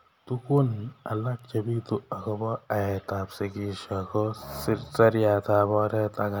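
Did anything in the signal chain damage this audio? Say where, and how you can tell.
Yes. Storage or a digital link flipped bits. Bit error spikes tick at 0.58 s before "alak chebitu akobo aet" and 1.39 s before "chebitu akobo aet ab". Each is one jumped sample, about -27 and -33 dBFS.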